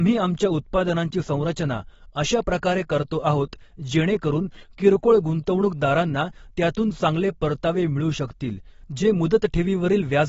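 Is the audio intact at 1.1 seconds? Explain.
No. At 1.1 s, as throughout the speech, the sound is dull and smeared, with a warbling, fizzy edge on sibilants. This is most likely AAC compression at a low bitrate, which fits roughly 24 kbps, where coarse quantisation truncates and thins the spectrum.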